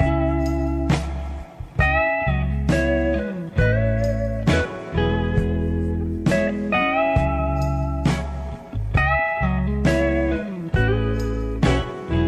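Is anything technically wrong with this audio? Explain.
No, nothing technically wrong can be heard in this audio. There is no point in the clip where the sound breaks, distorts or changes in a way that would signal a technical problem.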